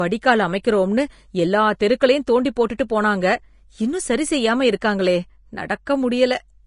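From start to finish the speech carries a hissy, grainy texture, with consonant attacks smeared and tonal parts roughened, most likely from Vorbis compression at a low bitrate, the damage fitting something around 33 kbps. The encoder has dropped everything above 10.5 kHz and quantised the upper band so coarsely that fine detail turns into noise of similar energy. A spectrogram would show a hard ceiling at 10.5 kHz and speckled, blotchy treble beneath it.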